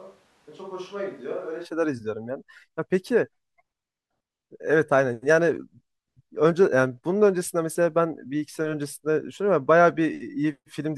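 From the very start until 1.64 s, the speech sounds roomy and hollow, thin in the bass, and roughly 10 dB quieter, with background noise sitting around 30 dB below it. This is a switch to a distant microphone, likely because the close microphone's signal was missing and a farther pickup was used. Unlike added reverb or a low-cut filter, it changes level, room sound and noise together, then snaps abruptly back to close, full sound at 1.64 s.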